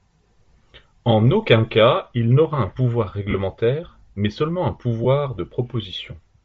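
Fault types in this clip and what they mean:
Bluetooth LC3 compression: The speech carries plainly audible codec damage throughout, a breathy, grainy edge. This is likely LC3 coding from Bluetooth LE Audio. The codec thins the upper spectrum and fills it with noise. The sound fits a low rate near 32 kbps with 7.5 ms frames.
lost LE Audio frames: Two brief dropouts occur. The decoder covers the gaps by replaying the last spectrum with scrambled phase, which gives a short noisy smear. The first runs from 3.30 to 3.35 s, after "il n’aura un pouvoir", and fits five lost frames. The second is at 5.04 s, after "mais seulement un".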